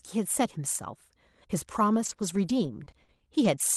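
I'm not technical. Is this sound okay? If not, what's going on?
No, not quite. From about 1.93 to 3.60 s there's repeated packet loss (robotic sound): bits of the call audio went missing six times, each gap up to 40 ms, and the system papered over them by stretching the last sound, so it turns choppy.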